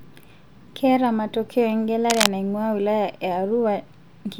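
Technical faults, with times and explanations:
2.10 to 2.27 s, cable scratch noise: a burst of harsh scratching and rustling lasting about 0.18 s sits over the speech at roughly the same loudness as the voice. The likely cause is a worn cable or connector being moved, so its contact resistance jumps about rapidly and injects ragged noise. On a spectrogram it shows as a dense, broadband smear of irregular vertical streaks; on the waveform, jagged spiky bursts ride on top of the speech envelope.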